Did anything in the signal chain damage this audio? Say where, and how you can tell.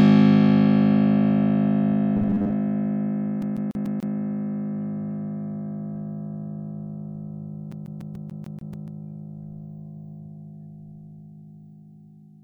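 Yes. From 2.17 to 2.55 s the music turns into robotic sound from repeated short buffers. A rigid, metallic buzz sits at a fixed 100 Hz. The sound still tracks the music only loosely. This points to the driver or buffer stage. The likely cause is an underrun. Fresh audio arrived too slowly, so the software replayed the last 10 ms again and again. Roughly two fifths of the passage was repeated material.

The second fault is a CD stuck on one turn, at the storage and playback stage. From 3.42 to 4.15 s the same 145 ms slice plays five times. From 7.72 to 8.88 s the same 145 ms loop plays eight times. Each jump has a brief mute. The stutter is fast and perfectly even. That is a scratch throwing the laser back one track at the same point on every revolution.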